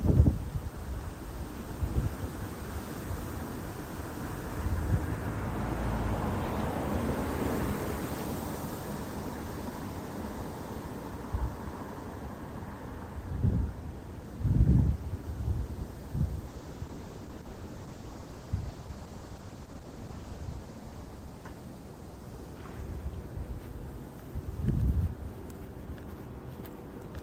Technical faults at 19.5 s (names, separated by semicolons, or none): call bitrate drop